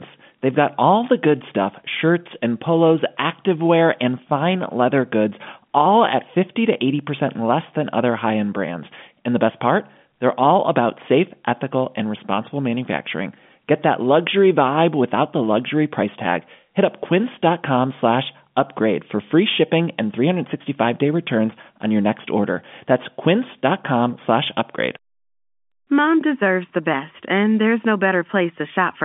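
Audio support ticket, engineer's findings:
No faults found: the speech carries the band-limited sound of G.711 telephone coding, with the line band running from about 150 Hz to 3.5 kHz and nothing above 3.7 kHz, consistent with a 64 kbps A-law telephone path.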